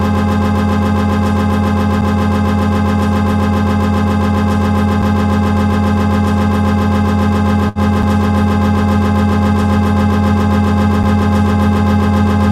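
At 2.01 s and 5.02 s there is a gap between chunks: playback stops for 6.5 ms wherever the audio was joined, every 3.0 s. Each is heard as a brief hard-edged hole, and the waveform shows a flat, sharp-sided notch with a thin vertical blank stripe on the spectrogram.

From 7.69 to 7.78 s comes a short stall from a late packet. The jitter buffer ran dry, so the last sound was stretched for 68 ms until the packet arrived, and nothing was skipped. It sounds like a held, slightly buzzy sustain. On the spectrogram this shows as horizontally smeared, repeated texture, and on the waveform as a looping, periodic stretch.

The same 6.5 ms chunk gaps return at 8.02 s and 11.03 s, continuing the 3.0 s spacing.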